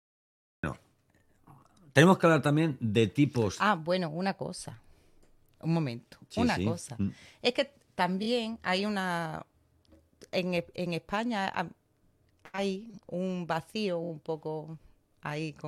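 The recording began late, a cut-off start: digital silence runs to 0.63 s, then speech enters abruptly mid-sound with no natural onset. One compressed frame was repeated: at 8.22 s a 23 ms block, which fits a 1024-sample frame at 44.1 kHz, plays twice more, adding 46 ms as a brief stutter. At 14.03 s it plays three more times, adding 70 ms.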